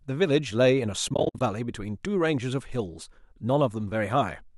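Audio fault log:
1.09–1.41 s, AAC frame loss with muting: across this 320 ms stretch the sound repeatedly sinks to silence and returns, about 190 ms missing in all, with the longest single gap around 70 ms. That fits a scatter of lost short frames, roughly 10 ms each, whose spectrum the decoder zeroed. The overlapping windows fade each hole in and out, so the edges are soft. That softness separates it from a hard sample dropout, and the silence separates it from concealment that fills gaps with repeated sound. The light roughness of the surrounding speech likely comes from low-delay AAC at 64 kbps and is not part of these holes.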